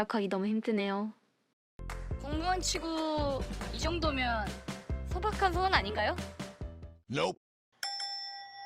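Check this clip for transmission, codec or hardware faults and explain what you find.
One transmission fault stands out, a call bitrate drop from 2.6 s to 4.17 s. The bandwidth estimate collapsed and the encoder coded far more coarsely for about 1.5 s. The change in quality points to a fall from about 96 kbps to roughly 18 kbps. The sound turns rough and watery, and the top end is cut away, leaving it muffled until quality returns. Unlike packet loss, nothing drops out or repeats.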